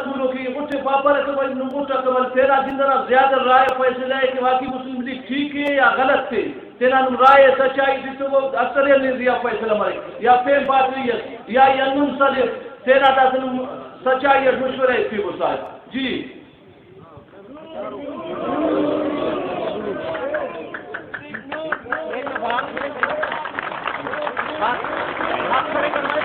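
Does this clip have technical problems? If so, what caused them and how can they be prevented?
Yes. Overlap between stream segments at 0.72, 1.71, 2.70, 3.69, 4.68, 5.68, 10.66 and 15.66 s: overlapping segment timestamps make the player discard 11 to 19 ms, producing tiny skips about 1 s apart through 5.68 s. Prevent it by generating contiguous, non-overlapping segment timestamps when packaging the stream.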